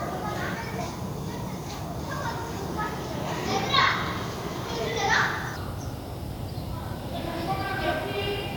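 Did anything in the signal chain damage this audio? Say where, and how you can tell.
Yes. Throughout the clip the sound is swirly, smeared and hollow, with blurred attacks, which is more damage than a single 128 kbit/s WMA encode would cause. This is generation loss at the codec stage, likely from about seven successive encodes. Each pass re-quantised the audio on a shifted frame grid, so the errors accumulated. A spectrogram would show ragged holes and flickering in the upper bands, smeared transients, and nothing above 20.1 kHz.

From 5.56 s to the end at 8.57 s, the sound plays at 0.796 times speed, so it drops about four semitones and drags. This is a section at the wrong speed, likely caused by an editing or playback clock mismatch. On a spectrogram, every harmonic steps downward at 5.56 s, and the waveform's events visibly stretch apart from that point on.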